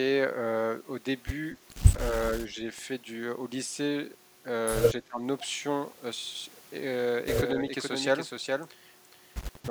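Speech suppressed in double talk affects this speech clip twice: a shallow, brief dip of a few decibels from 2.11 to 2.20 s, and a much deeper drop of about 20 dB from 5.04 to 5.22 s. The likely cause is an echo canceller that could not tell the local talker apart from loudspeaker echo while both sides spoke, so it pulled the level down on its own talker along with the echo in those moments. A doubled audio track starts abruptly at 7.29 s and runs to the end. A second full-band copy of the speech trails the original by roughly 0.4 s, sitting a little quieter, with no decay or room colouring. That clean, fixed lag points to the same audio likely being mixed in again from a slower capture path or a misaligned edit.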